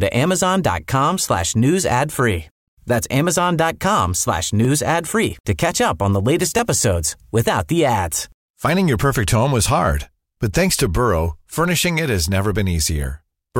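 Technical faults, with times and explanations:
4.65 s and 6.59 s, dropped samples: a single sharp click lands just before "ad free to catch", and another between "up on the latest" and "episodes without the ads". Each is one thin vertical line across the spectrum, likely from about 0.7 ms of samples going missing so the waveform jumps straight to a later value. Unlike a dropout, no sound is audibly lost and there is no gap, only the click.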